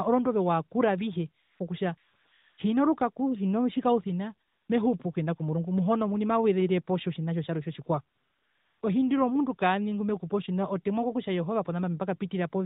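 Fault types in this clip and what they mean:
AMR comfort noise: The phone decided the talker was silent and stopped sending speech frames, so the receiver filled each gap with synthetic noise built from a coarse description of level and spectrum. Four times, the real background switches to a smooth, steady hiss.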